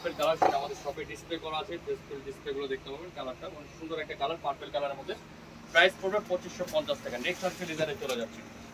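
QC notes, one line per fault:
Nothing stood out on listening.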